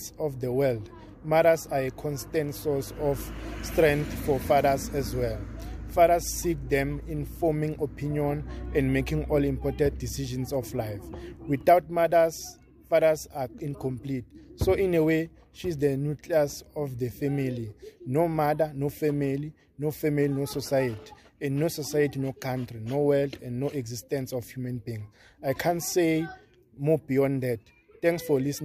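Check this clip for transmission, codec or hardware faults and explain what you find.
No transmission, codec or hardware faults.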